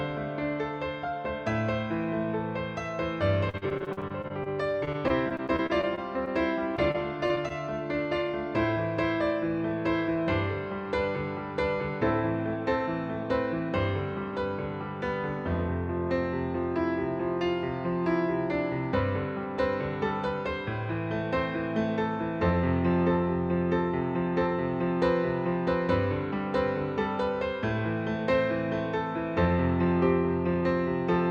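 From 3.49 to 6.28 s, and again from 6.76 to 7.52 s, repeated packet loss (robotic sound) breaks the audio into many short dropouts, the longest 41 ms and 34 ms. Each is patched by extending the preceding sound, giving a choppy texture with pieces missing. A spectrogram shows smeared, repeated slices between abrupt gaps.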